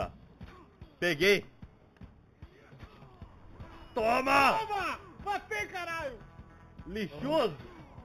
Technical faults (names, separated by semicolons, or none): imaging from linear upsampling